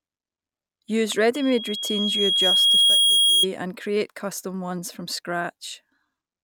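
A speech recording in which a microphone is picking up the loudspeaker it feeds, so the loop gain rises above unity at one frequency and that tone runs away: loudspeaker feedback squeal from 1.34 to 3.46 s. A pure whistle near 3.3 kHz swells over roughly a second and a half until it sits around 10 dB above the speech, then stops just before "and create custom ones."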